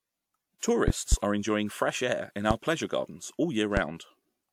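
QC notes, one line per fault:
0.58–0.62 s, pre-echo: the transform codec spread block quantisation noise ahead of an attack, so about 37 ms of hiss precedes it and smears the onset.
0.88–1.16 s (two pops, before "are enjoying fresh air"), 2.51–2.54 s (between "enjoying fresh air in" and "pleasure gardens all"), 3.77–3.81 s (after "pleasure gardens all"), loud pop: likely a voltage step or pulse from a plug, switch, static or driver glitch added to the signal. Each gives a sharp pop, or two in quick succession in the first, roughly 15 to 20 dB above the speech, which continues underneath.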